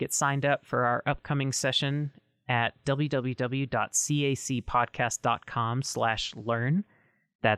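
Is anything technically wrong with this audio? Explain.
No technical faults are audible.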